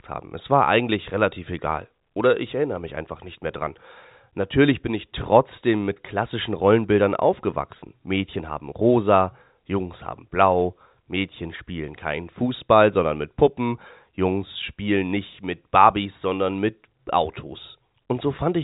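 No faults are present; the band stops near 3.8 kHz, as expected of G.711 telephone coding, and the faint level-following quantisation hiss of that format is the only trace of the chain.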